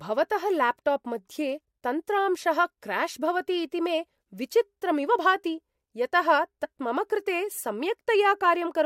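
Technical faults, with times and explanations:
6.63 s, compressed frames skipped: the speech jumps forward by around 40 ms, a loss that fits a couple of whole compressed frames of about 21.3 ms each, which the decoder never played because they were missing or rejected as damaged. The skip is a whole number of frames, not an arbitrary cut.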